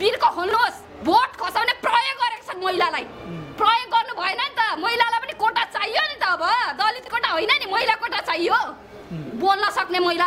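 Chunks out of order occur twice. At 0.49 to 0.53 s, a chunk of about 23 ms, which fits a 1024-sample buffer at 44.1 kHz, arrives one slot late and plays after its successor. At 6.99 to 7.08 s, a chunk lands three slots late. Nothing goes missing, but the sequence is scrambled, leaving three hard joins each time. The result is a brief jumbled stutter, longer and more shuffled at 7 s.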